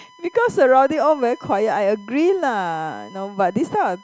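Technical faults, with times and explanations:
Throughout, USB whine: a steady, thin whistle pinned at 1 kHz sits under the speech for the whole clip, about 30 dB below it. The USB bus's 1 ms frame timing draws current in pulses that leak into the audio through shared power or ground.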